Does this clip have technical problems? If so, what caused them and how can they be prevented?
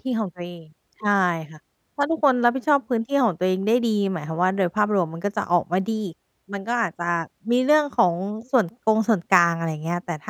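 No, the signal shows no technical faults, so there is nothing to trace back to a cause or to prevent.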